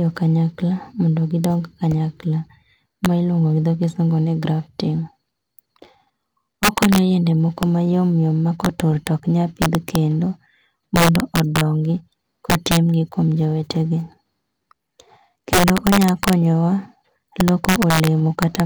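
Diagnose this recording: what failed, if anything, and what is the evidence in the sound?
Integer overflow in the sample-format conversion or an integer gain stage. The speech is pushed about 7 dB too hot, and the few peaks past full scale, well under one percent of samples, wrap to the opposite sign instead of limiting, giving harsh cracks on loud syllables throughout.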